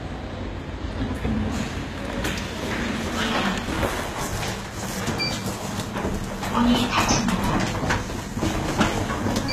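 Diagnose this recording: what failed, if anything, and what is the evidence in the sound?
Codec stage. Plainly audible coding damage runs throughout, and nothing reaches above 14.9 kHz. This is likely HE-AAC compression, at a bitrate near 20 kbps, with treble rebuilt from copied lower bands.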